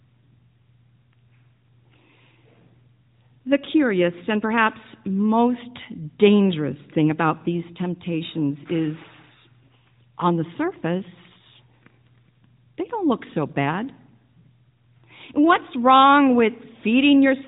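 Nothing stood out on listening to this speech clip.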